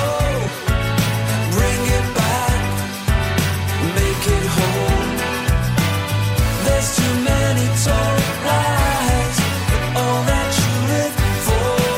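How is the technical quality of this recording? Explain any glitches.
One glitch stands out. At 0.47 s, compressed frames are skipped. The audio jumps ahead by about a tenth of a second, which fits several lost frames of about 23 ms each. At the join the sound lurches forward abruptly.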